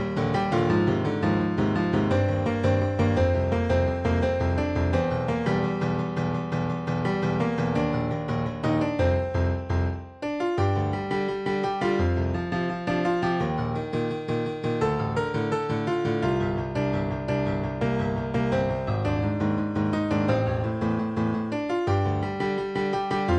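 Nothing is technically wrong with this clip.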